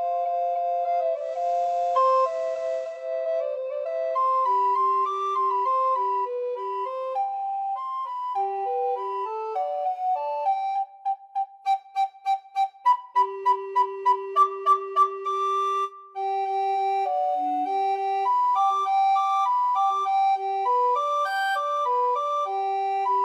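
Digital radio blending to analogue occurs from 1.08 to 3.14 s. The receiver cross-fades over about 0.4 s to FM, bringing hiss roughly 30 dB down and a level shift of about 1 dB.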